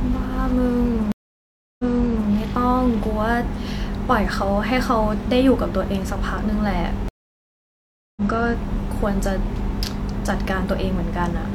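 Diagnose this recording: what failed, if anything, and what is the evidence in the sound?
At the network stage, the connection dropped twice, each time forcing a stream reconnect with a fresh decoder. At 1.12–2.30 s, 672 ms of silence, then speech resumes 511 ms earlier and repeats. At 7.08–8.22 s, 1.08 s of silence, then it resumes roughly 0.7 s later, skipping ahead.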